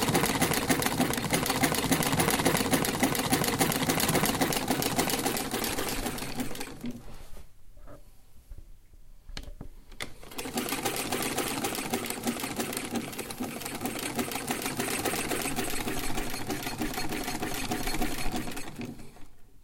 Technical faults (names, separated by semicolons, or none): none